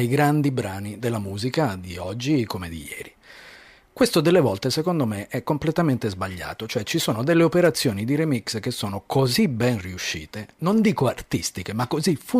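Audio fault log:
7.64–7.68 s, wireless microphone noise hit: the FM radio link from the microphone faded for about 46 ms as reflected signals cancelled at the receiver, so receiver noise rose over the speech and is heard as a brief swish of static.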